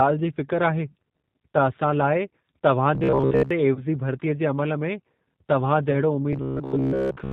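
The whole clip carries G.729 codec damage at 8 kbit/s. Speech is band-limited below 4 kHz and sounds rough and synthetic.

From 2.95 to 3.51 s, robotic sound from repeated short buffers sets in. Most of the audio is replaced by repeats, giving a rigid 66.8 Hz buzz, which likely points to 15 ms buffers being replayed.

At 3.75 to 3.84 s, VoIP packet loss concealed by the speech codec appears. A 20 ms gap, fitting a single lost packet, is filled by extrapolating from the last pitch and filter, with the level fading.

The same concealment recurs at 5.91 to 5.94 s, again bridging a 20 ms gap.

From 6.33 to 7.32 s, the same robotic buzz at 66.8 Hz returns and runs to the end.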